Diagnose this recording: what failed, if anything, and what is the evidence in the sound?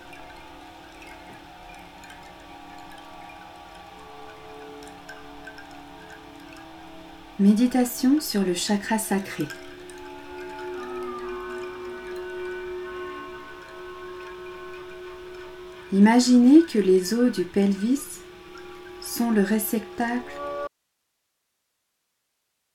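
At 20.68 s the signal abruptly drops out and never returns, leaving only hiss roughly 55 dB below the programme level until the end. That's an audio dropout to a faint residue: the chain downstream stayed live, so the likely culprit is an intermittent analogue connection.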